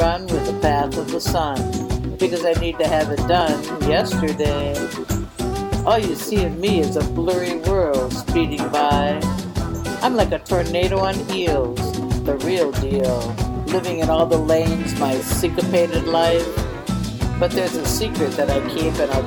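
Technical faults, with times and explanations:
0.40 to 18.99 s, clock drift buffer slips: there's a regular tick every 0.6 s, about 30 of them across that stretch, audible wherever there's signal. The likely cause is two devices running on separate clocks that disagree by roughly 500 ppm. The buffer between them slowly overfills or runs dry, then drops or repeats a short block of samples, something in the region of 15, and each of those jumps comes out as a click.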